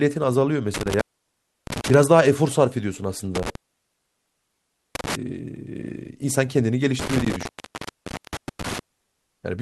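Speech, interrupted by an intermittent contact three times: 0.74–1.94 s, 3.35–5.15 s and 6.99–8.79 s. A loose cable or plug opens briefly. The sound drops out for about 0.66 s, 1.4 s and 0.88 s, with crackle at the break edges.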